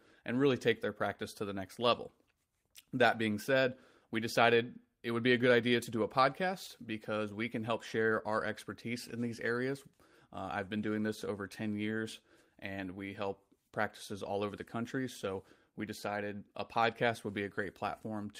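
Speech recording, no technical faults detected at any point.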